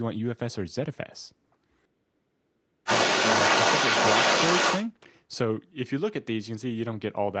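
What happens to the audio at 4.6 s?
The echo canceller likely missed loudspeaker sound reaching the microphone, so the other side's voice leaks through from 2.86 to 4.87 s, roughly 5 dB above the talker.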